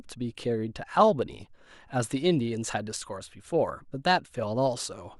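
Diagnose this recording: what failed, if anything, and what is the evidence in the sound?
Nothing in the recording stood out as a fault on listening.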